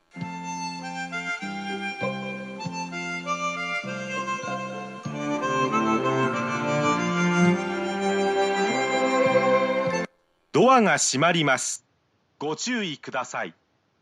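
An input switched to a poorer device at 11.76 s and stays that way to the end at 14.02 s. The change is immediate, with no gap. From then on nothing reaches above 7.3 kHz, so the top end turns dull and boxy. The level drops by about 10 dB and fresh background noise appears, roughly 35 dB under the signal. The likely cause is the recording jumping to a narrower-band microphone or headset profile.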